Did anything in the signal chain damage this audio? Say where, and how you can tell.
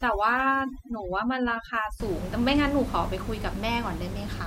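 Yes. From 0.0 to 2.0 s, the background drops and breaks up into twinkling specks. This is overdone noise removal in call processing, gating bands at noise level.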